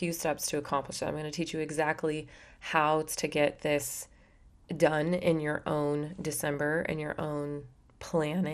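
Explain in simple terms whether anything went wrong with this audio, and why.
MP2 compression, throughout: the speech sounds dull and plainly gurgly, likely because a digital-radio codec discarded upper frequency bands and stored the rest roughly.

DAB burbling, at 6.54 s: just after "done in your own" and before "and your", a few brief watery blips appear where corrupted radio data briefly garbled some frequency bands.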